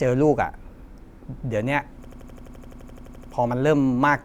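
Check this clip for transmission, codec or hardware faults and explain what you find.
There is one hardware fault. From 2.05 to 3.33 s, a system hang loop: the system froze while the hardware replayed one 85 ms buffer, producing an 11.7 Hz machine-gun stutter.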